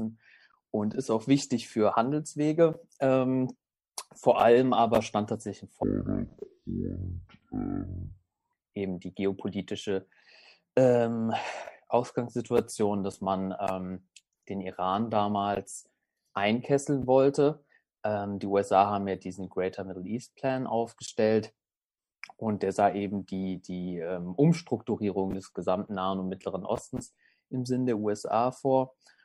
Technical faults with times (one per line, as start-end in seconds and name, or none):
5.83-8.53 stereo read as mono